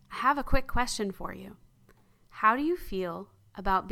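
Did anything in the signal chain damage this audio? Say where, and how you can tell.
No, nothing along the signal chain audibly damaged this speech recording, and it shows no sign of trouble at any stage from capture to playback.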